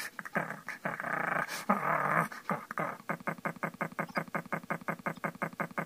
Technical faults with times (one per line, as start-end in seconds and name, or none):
3.22-5.85 broken-record loop
4.07-4.18 corrupt frame decoded
5.14-5.17 corrupt frame decoded